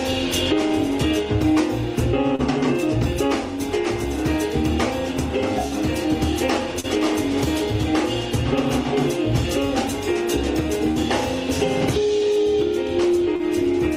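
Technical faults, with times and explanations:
2.35–2.42 s, 6.80–6.86 s, 10.91–10.99 s and 13.36–13.42 s, short concealed packet loss. Each time, about 40 ms of audio arrived too late to be decoded. The receiver patched each gap by extending the preceding sound for 32 to 43 ms, then crossfaded back into the real signal. The patched stretch is a guess, not the true audio, so each event sounds like a brief smear or wobble.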